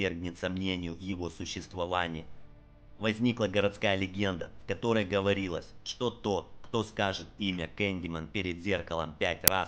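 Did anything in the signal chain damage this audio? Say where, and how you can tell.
Yes: file tags played as audio at 9.48 s, a storage-stage fault. Compressed cover-picture data read as samples gives a hard-edged burst of very loud white noise.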